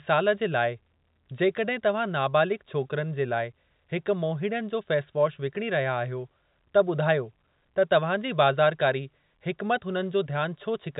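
No technical faults can be heard in this speech.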